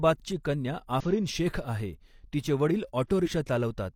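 Speech with two bursts of damaged data in a compressed stream, at 1.00–1.05 s just before "शेख़ आहे तिचे" and at 3.22–3.28 s: corrupted frames make the decoder lose sync, producing brief glitches such as a chirp, squawk, click or short hole.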